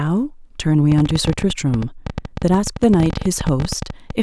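From 0.92 s to 4.11 s a train of clicks runs over the speech: about 40 near-identical pulses at roughly 13.5 per second, unevenly spaced, peaking around 10 dB above the signal and audible in pauses too, likely interference from nearby equipment or a faulty connection or power supply.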